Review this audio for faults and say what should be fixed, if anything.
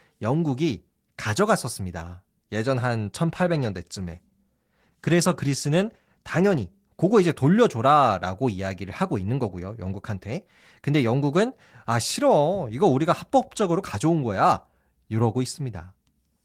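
A call bitrate drop runs from 3.29 s to 7.57 s. The speech turns rough and watery, sounding coarsest for about 3.4 s within that span, which points to the encoder falling from roughly 32 kbps to about 17 kbps after the bandwidth estimate fell. With fewer bits, the codec quantises the spectrum more coarsely. A spectrogram would show sparser, patchier harmonic detail across those seconds, while the waveform envelope stays largely unchanged. To prevent it, ensure stable network capacity or set a higher minimum encoder bitrate so the call does not starve the codec.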